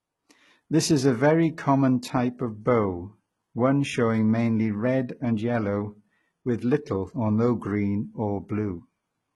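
From start to finish the speech carries heavy codec damage, and it sounds like likely HE-AAC compression at a very low rate, something in the region of 16 kbps. The treble feels synthetic, because only the lower spectrum is really coded and the top is copied up from below. So the s sounds come out gritty and lispy, the harmonics don't sit right across the join, and nothing reaches past about 11.8 kHz.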